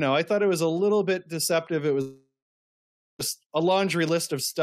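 Speech, with a long network dropout from 2.01 to 3.21 s, likely from lost packets. A short fading buzz gives way to 0.88 s of silence, a flat, empty band on the waveform and spectrogram, before the audio resumes with about 1.18 s missing.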